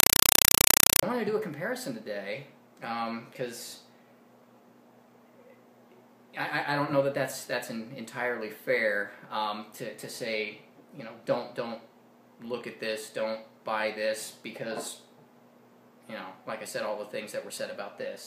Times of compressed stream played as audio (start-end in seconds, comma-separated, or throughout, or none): 0.00-1.03